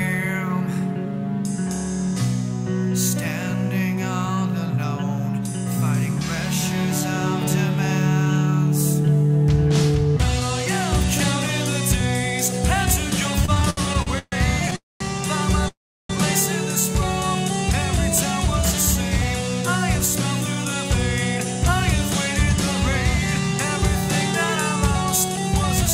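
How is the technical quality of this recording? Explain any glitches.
The recording has clear network-delivery faults in its second half: a stuttering passage, two short freezes, and two stretches where the audio runs slightly fast.

Repeated stalls (stutter), 13.45 to 14.74 s: the jitter buffer ran dry ten times as packets arrived late. Each gap was bridged by extending the previous sound, the longest for 135 ms. Concealment fills about 27% of that span, so the audio drags and stutters while losing essentially nothing.

Call audio freeze, 14.76 to 15.02 s and 15.68 to 16.11 s: the sound holds, then drops to silence for 190 ms and 350 ms respectively before resuming where it stopped. The likely cause is packets held up in transit, emptying the buffer; 246 ms and 410 ms of delay are inserted with nothing missing.

Jitter buffer speed-up, 20.65 to 21.55 s and 23.48 to 25.44 s: to shed the delay built up earlier, the receiver trimmed short pitch-period segments repeatedly, roughly 40 ms and 50 ms in total. 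Playback runs at 103% and 102% with unchanged pitch.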